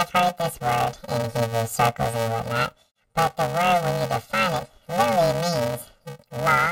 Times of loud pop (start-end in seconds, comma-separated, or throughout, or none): none